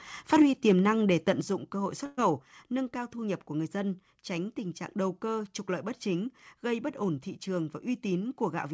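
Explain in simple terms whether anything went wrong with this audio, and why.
Microphone overload happens three times early in the speech: from 0.32 to 0.42 s, from 0.68 to 0.72 s just before "năng để", and around 1.3 s between "năng để" and "dụng cơ hội". The microphone was likely set too sensitive, so the loudest moments pushed past the highest level the recording could capture. The tops of those peaks were sliced flat, and that gives these short stretches a rough, crackly edge.

A microphone volume step-down follows at 0.42 s and again at 1.41 s, just before "dụng cơ hội". Both times the speech and the background suddenly become quieter in a single step, with no gradual fade. This is likely the call software reacting to the overloads just before. It heard the input as too loud and cut the microphone's volume down at once.

A burst of packet loss comes from about 2.06 to 2.19 s. Roughly 120 ms of audio never arrived in time to be played. 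The receiving end covered the gap by stretching the last sound it had and letting it fade, which can be heard as a brief held buzz or hiss. When the speech returns, the part that should have filled that moment is simply gone.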